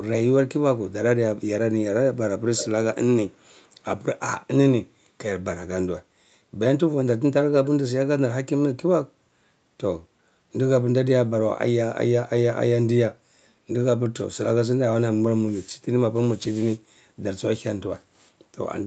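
Speech with an echo leak: faint delayed repeats at 3.32 s (315 ms lag, barely visible) and a stronger one around 15 dB down at 7.65 s (273 ms), showing as ghost spectrogram traces, likely from incomplete echo cancellation.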